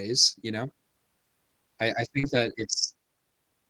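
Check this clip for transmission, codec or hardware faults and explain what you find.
Three network faults are audible, all from packets lost in transit.

The first is a lost packet rebuilt from error correction at 0.33 s, just before "you know". That packet never arrived, so the decoder played the low-bitrate backup copy carried in the next packet. There is no gap, but that instant sounds briefly rougher and noisier.

Right after "I I", from 2.19 to 2.25 s, comes a short concealed packet loss. About 40 ms of audio arrived too late to use. The receiver filled roughly 37 ms of it by extending the preceding sound and then blending back into the real signal, which leaves a brief smear or wobble.

Overlapping that, from 2.23 to 2.81 s, is a longer stretch of lost packets rebuilt from error correction. About 300 ms, across 15 separate lost packets, was replaced by the degraded backup copies. 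The sound stays continuous but turns grainier and noisier across that half-second.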